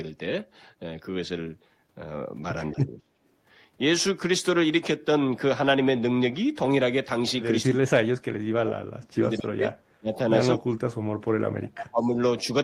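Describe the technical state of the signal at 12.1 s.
An echo canceller likely failed to tell the near talker from loudspeaker echo during double talk and turned both down, so speech suppressed in double talk runs from 11.23 to 12.18 s. The sound dips and breaks up for about a second, falling by roughly 40 dB at its deepest.

Within that span, from 12.02 to 12.06 s, an echo leak likely lets part of the loudspeaker pickup slip past cancellation. A faint scrap of the voice returns 221 ms late, about 35 dB below the speech.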